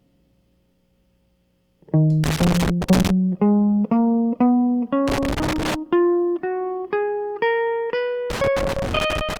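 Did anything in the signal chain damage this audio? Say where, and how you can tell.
Yes: loose connector crackle in the analogue wiring at 2.24–3.10, 5.08–5.75 and 8.30–9.37 s. A flickering contact chops the music, leaving irregular vertical broadband streaks and spiky dropouts.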